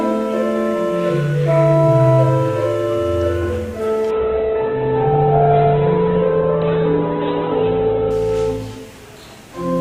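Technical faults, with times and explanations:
4.11 to 8.11 s: adaptive stream at a lower bitrate. The sound switches abruptly, with no gap, to a thinner version with nothing above 4.2 kHz and a grainy texture, which fits a fall from about 64 to 8 kbit/s Opus after the connection slowed.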